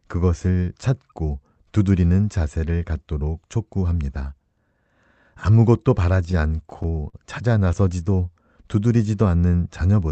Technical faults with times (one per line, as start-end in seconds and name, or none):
6.31-7.16 repeated stalls (stutter)